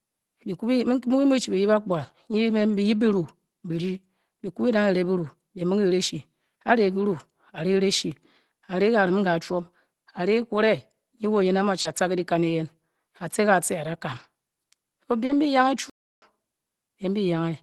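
At 11.81 to 11.87 s a short concealed packet loss leaves about 40 ms missing. The receiver extends the preceding sound, pitched or noise-shaped, and crossfades back, giving a brief smear or wobble where a short consonant can disappear.

Directly after, from 11.85 to 11.91 s, comes a lost packet rebuilt from error correction. About 40 ms is decoded from the low-bitrate copy carried in the following Opus packets. It plays without a gap but sounds rougher and noisier. The same happens over a longer 80 ms stretch at 14.11 to 14.25 s, which fits roughly four packets.

A second concealed loss at 15.25 to 15.31 s blends into another error-correction rebuild at 15.29 to 15.35 s, with the same smear followed by a grainy patch.

At 15.90 s a playback stall cuts the audio mid-flow for about 0.32 s before it resumes at 16.22 s. It is likely the player ran out of buffered data or its thread was blocked.

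Through the call path, the Opus coding at 24 kbps adds its own coding noise, and nothing above 12 kHz comes through.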